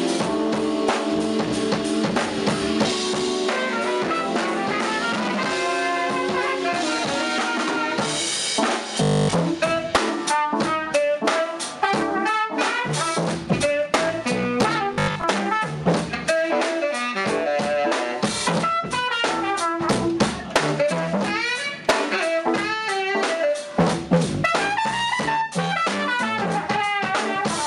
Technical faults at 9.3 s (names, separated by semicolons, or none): robotic sound from repeated short buffers